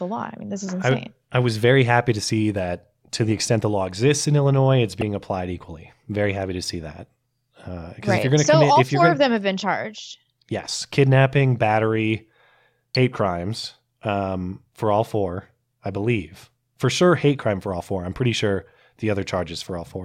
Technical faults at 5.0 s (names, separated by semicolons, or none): compressed frames skipped